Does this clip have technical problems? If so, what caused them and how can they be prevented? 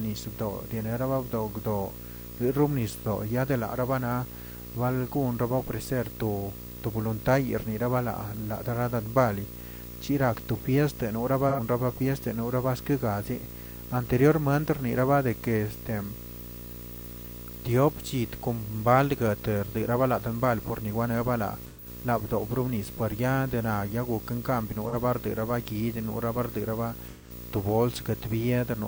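Yes, there are two. Video or display buzz runs through the whole clip: a 59.94 Hz buzz at the picture's field rate, with hash above it and a thin whine at 15.7 kHz from the line rate. It sits fairly loud, not far below the speech. A screen or video cable is coupling into the audio path. Keep audio lines away from video cabling and monitors, and fix any shared grounds.

There's also AAC frame loss with concealment, in four short patches: 11.48 to 11.60 s, 21.66 to 21.87 s, 24.88 to 24.95 s, and 27.08 to 27.30 s, right after "barera ba". Each gap runs about 40 to 130 ms. The decoder patched over missing frames by reusing the last good spectrum, so those moments come out smeared and a bit phasey. Use a more reliable link, or add retransmission or error protection to the stream.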